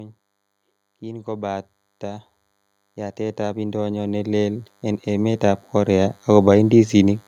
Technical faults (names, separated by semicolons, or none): DECT cordless phone buzz; automatic gain rising